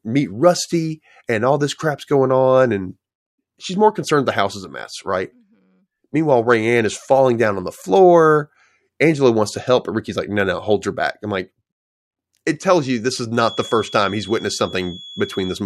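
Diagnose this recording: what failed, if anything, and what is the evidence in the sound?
From 13.31 s, just after "tells you this is", a thin whistle at 3.4 kHz sits well below the speech until the end at 15.65 s, swelling and fading slowly in level. It is a feedback whistle, likely from an analogue loudspeaker-to-microphone loop held just short of runaway.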